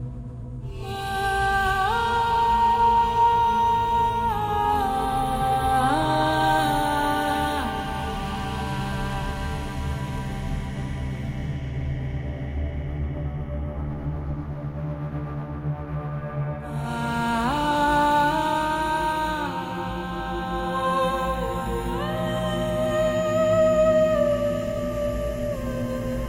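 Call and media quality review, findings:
USB whine, 1.16 to 4.1 s. USB bus current drawn in 1 ms frames leaks in through power or ground. Fixed-pitch tone on a 1 kHz fundamental, strongest at 3 kHz, around 30 dB below the audio.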